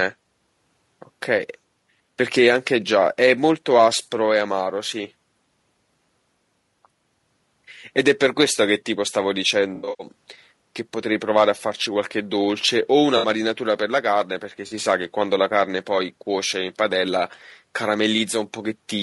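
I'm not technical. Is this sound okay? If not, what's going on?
No. The whole recording has a rough, grainy edge on the voice, with a hiss-like fuzz between its tones and a thin, slightly artificial top end. This is most likely low-delay AAC compression, the data-squeezing used in video calls, set too tight here. It is steady throughout rather than in bursts.

There are also three brief AAC frame losses with concealment, where chunks of data went missing and the decoder guessed to fill the gaps. From 9.75 to 10.06 s the sound turns smeared and noisy in scattered patches, the longest about a tenth of a second. Shorter blips follow at 13.17 to 13.27 s and 14.67 to 14.73 s. Unlike the constant roughness, these are momentary, and none drop fully into silence.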